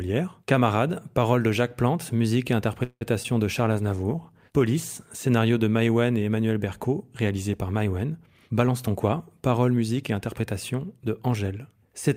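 A speech recording with four call faults. Just after "musique et", from 2.83 to 3.03 s, the sound stretches into a fading buzz with about 60 ms of silence, likely a call audio freeze; the waveform shows a smooth decaying tail, then a flat gap. At 3.23–3.27 s a short concealed packet loss leaves a brief smear, with a blurred, smoothed patch on the spectrogram. From 3.73 to 5.13 s, ending before "scénario de", a call bitrate drop from 64 to 23 kbps makes the audio rough and muffled for about 1.3 s, with the spectrogram's upper band cut off and grainy. Between 8.5 and 10.75 s a jitter buffer speed-up plays the audio about 7% fast at unchanged pitch, trimming about a fifth of a second, so syllables look compressed in time.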